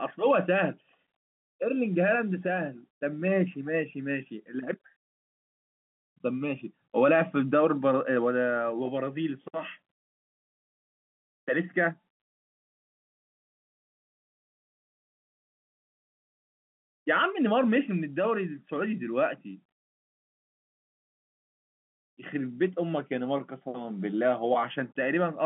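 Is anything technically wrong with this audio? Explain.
No, nothing in this speech recording sounds technically wrong. It carries the narrow band of G.711 telephone coding, running from about 150 Hz to 3.5 kHz with nothing above 3.8 kHz, as a normal phone line would.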